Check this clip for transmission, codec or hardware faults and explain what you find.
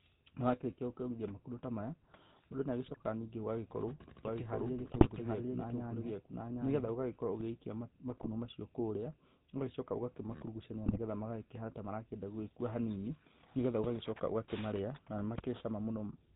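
Three kinds of fault are present: a GSM full-rate codec coloring the whole speech clip, four bursts of GSM bit errors, and a stretch where the audio is doubled.

The GSM full-rate codec is audible throughout, and its character fits the 13 kbps full-rate coder. It rebuilds the voice from a vocal-tract filter fed by a sparse, regularly spaced pulse excitation, which gives the plainly buzzy, gravelly roughness. On a spectrogram, everything stops at 4 kHz.

GSM bit errors strike at 2.85–3.02 s, 4.79–5.07 s, 8.10–8.27 s and 10.86–10.99 s. Corrupted filter, pitch and gain values turn the speech into squawks, pops and gargling. On a waveform, level spikes appear. On a spectrogram, the bands smear or flare frame by frame.

A doubled audio track runs from 4.25 to 7.41 s. A full-band copy at roughly the same level trails by about seven-tenths of a second, starting and stopping abruptly with no decay. 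It is likely a second capture path or an edit that kept two offset copies. On a waveform, the repeated shapes are visibly offset.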